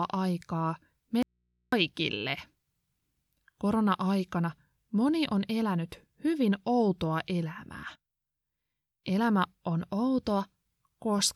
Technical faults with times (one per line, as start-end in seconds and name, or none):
1.23-1.72 audio dropout to a faint residue